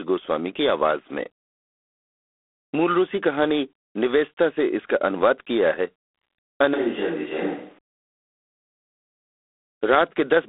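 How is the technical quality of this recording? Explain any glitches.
The recording is telephone-grade throughout, with one short stretch where the pickup changes character.

G.726 ADPCM, whole clip: each sample is coded as a coarse difference from a predicted value, with a harsh rasping hiss following the speech level and a 300 Hz to 3.5 kHz band. The damage is plainly audible and fits 24 kbit/s.

Switch to a distant microphone, 6.74 to 7.78 s: the speech turns abruptly roomy and hollow, with thinner bass and room noise about 35 dB below it, while the level hardly changes. This is likely the close microphone dropping out and a farther one covering.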